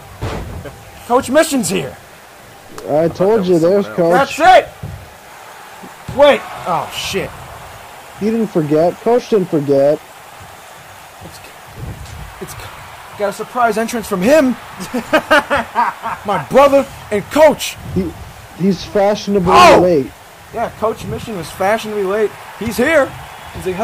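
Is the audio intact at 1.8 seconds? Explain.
No, there's gritty grain following the sound at 1.8 s and throughout, roughly 35 dB down, likely low bit depth without dither, consistent with rounding to about 7 bits.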